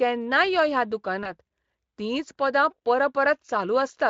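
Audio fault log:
1.23–1.33 s, VoIP packet loss concealed by the speech codec: right after "यो ह्या" a gap of about 20 ms, which fits a single dropped frame, arrived at the Speex decoder. The decoder filled it by stretching the last pitch period and spectral shape with falling gain. The result is a brief smear, and because each new frame is built on the previous one, the following frames stay weak or distorted until the stream recovers, about 0.1 s later.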